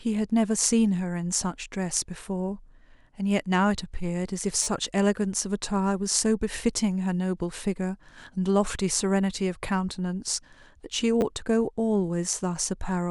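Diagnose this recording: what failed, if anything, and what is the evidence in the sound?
The playback buffer stage failed with a repeated buffer fault. At 4.63 to 4.67 s one short slice of speech plays five times in a row, and at 11.21 to 11.23 s three times, giving a brief buzzy stutter with hard joins. The repeat rate fits a 10 ms buffer replayed while new audio arrived late.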